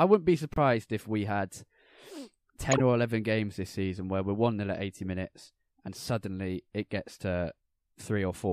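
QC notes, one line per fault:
0.54–0.58 s, corrupt frame muted: between "wouldn't be" and "if we had" the audio drops abruptly to silence for 40 ms, which fits two consecutive frames the decoder rejected as damaged. The player filled the hole with silence, so timing stays intact.
2.72–2.80 s, corrupt frame decoded: an 88 ms burst of misplaced energy peaking around -15 dBFS. Flipped bits in a handful of frames were decoded anyway, so misread codes and gains scattered energy across wrong frequencies.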